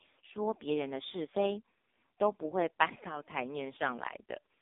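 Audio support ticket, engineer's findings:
AMR narrowband mobile codec, whole clip. Speech heavily buzzy and synthetic; nothing above 3.8 kHz, band roughly 250 Hz to 3.7 kHz. Probable component: mobile voice path encoding at AMR-NB's lowest mode, which fits about 4.75 kbps. Few excitation pulses per 5 ms subframe give the metallic rasp. Unlike a simple telephone band-pass, the voice itself sounds artificial, not just dull.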